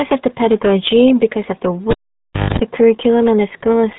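A RealAudio 14.4 codec, at a rate that fits an 8 kbit/s stream, has heavily degraded this speech, cutting everything above 3.9 kHz and leaving it muffled and gargly throughout. At 1.90 s a live cable was pulled out and plugged in again. A pop is followed by about 0.64 s of near silence, including about 0.22 s of 50 Hz mains buzz as the plug tip makes contact, and a second pop brings the sound back at 2.59 s.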